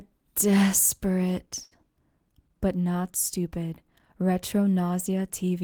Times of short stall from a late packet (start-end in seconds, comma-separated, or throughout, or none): 1.63-1.73